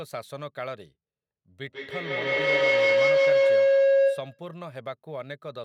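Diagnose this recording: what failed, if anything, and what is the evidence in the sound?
Feedback howl in call processing, 1.67 to 4.55 s. The room loop gains level each trip. A tone near 500 Hz rises about 14 dB over the speech, pulsing roughly every 150 ms.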